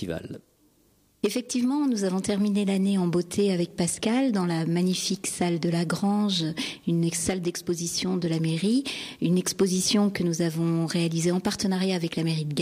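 Nothing in this audio stands out as a technical fault at any point, so there's nothing to flag here.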